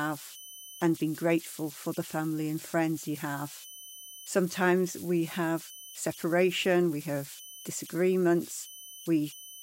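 Converter idle tones run through the whole speech clip. The delta-sigma converter lacks dither, so small inputs lock into repeating bit patterns. These produce a whistle around 3 kHz in pauses and grainy noise under quiet passages, about 19 dB below the signal.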